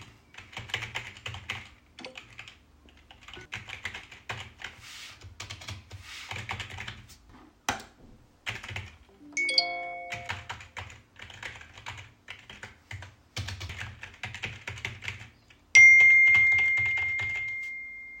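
At 7.30, 10.28, 13.70 and 15.74 s, damaged data in a compressed stream produces brief glitches as the decoder misreads corrupted frames and resyncs on the next header.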